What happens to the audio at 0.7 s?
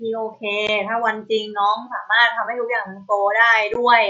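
At 0.67 s the speech drops out for about 15 ms, the gap of two lost packets, in an unconcealed Bluetooth headset packet loss. Nothing reconstructs the hole, so it's silence or an idle pattern with abrupt edges, unlike concealed loss, which smears or repeats the surrounding sound.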